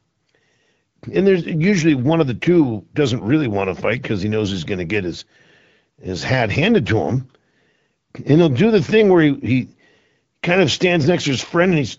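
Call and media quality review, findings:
No faults found; speech carried over the AMR wideband (HD Voice) codec at 12.65 kbit/s, path operating as expected.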